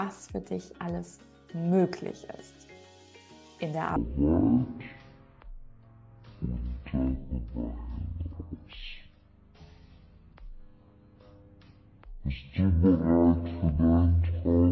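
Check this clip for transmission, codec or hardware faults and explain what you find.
One fault is present. From 3.96 s to the end, wrong sample rate: unconverted playback at a lower rate, fitting 44.1 kHz played as 16 kHz, slows the sound to 0.363 speed, 17.6 semitones lower.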